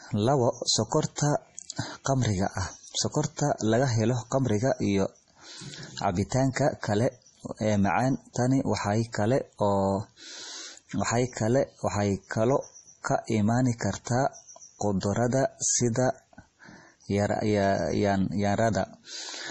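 From start to finish the speech carries heavy damage that is likely from MP3 compression. Nothing is present above 11.4 kHz, where the encoder has cut the treble to save bits, and the depth of the damage points to a low bitrate of around 32 kbps. Weak frequency lines drop in and out from one frame to the next, giving a watery, swirling texture with metallic chirps on s sounds and smeared attacks.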